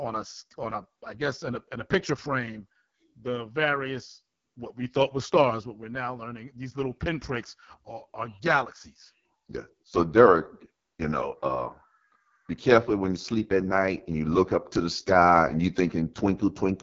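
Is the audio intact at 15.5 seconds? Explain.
No. At 15.5 seconds, as throughout the clip, the speech sounds rough and raspy, with nothing above about 7.2 kHz. This is AMR wideband (HD Voice) codec damage: the speech model runs out of bits at this rate, which fits AMR-WB's lowest 6.6 kbit/s mode.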